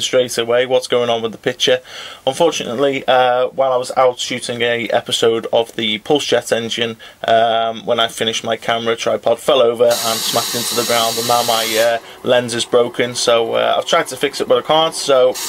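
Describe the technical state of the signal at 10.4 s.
At 10.4 s the signal is intact, with no audible dropout, distortion, clipping or other technical fault at that moment.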